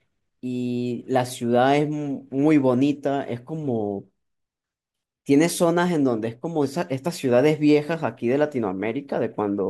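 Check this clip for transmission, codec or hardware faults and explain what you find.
Checking this clip turns up no faults to explain.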